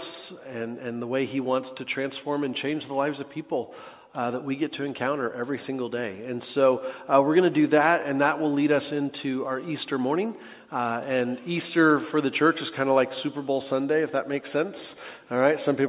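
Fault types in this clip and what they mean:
No technical faults can be heard anywhere in this clip.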